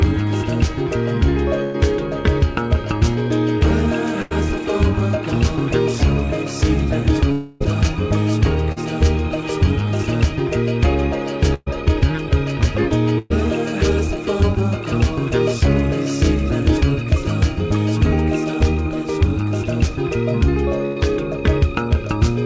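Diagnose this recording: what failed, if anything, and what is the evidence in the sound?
The stage is the network feeding a call receiver. Five bursts of packet loss are audible, at 1.64 to 1.76 s, 4.22 to 4.33 s, 11.54 to 11.68 s, 13.18 to 13.32 s and 20.86 to 20.98 s. Each one holds the last sound as a fading buzz or hiss. The audio then resumes further on, with about 80 to 120 ms missing. The gap at 11.54 s ends in about 20 ms of silence. The receiver extended the last good audio across the lost packets.

A longer break runs from 7.32 to 7.62 s. This is likely a long network dropout. About 280 ms never arrived. The concealment fills the whole stretch, so there is no silence. The held sound decays over those three tenths of a second, and the audio rejoins later with that span gone. The audio's band stops at 8 kHz, which fits a G.722 call path.

At 8.72 to 8.78 s there is a brief smear. 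This is short concealed packet loss. Roughly 40 ms failed to reach the decoder in time. The receiver continued the preceding sound, using its pitch or shaped noise, and then blended back into the real audio. The result is a quick wobble rather than a gap.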